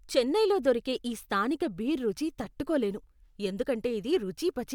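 No technical faults are audible anywhere in the speech recording.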